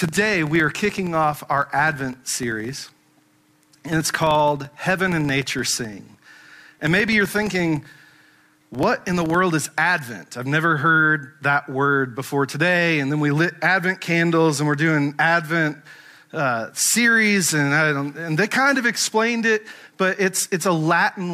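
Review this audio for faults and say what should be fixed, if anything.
From 0.0 to 9.48 s, a filter restarted on every block resets its state, so each block opens with a transient. This produces a 23.4 Hz buzz, which fits a 2048-sample block. Unlike mains hum, the buzz rises and falls with the signal's level. Carry the filter's state across block boundaries instead of reinitialising it.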